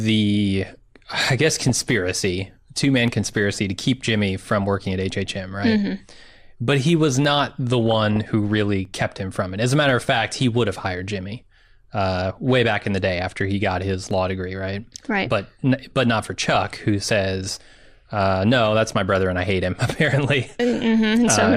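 Dropped samples at 3.08, 7.25, 8.85 and 14.11 s: each is a single sharp click in the speech. The likely cause is a fraction of a millisecond of samples going missing, so the waveform jumps straight to a later value and breaks continuity.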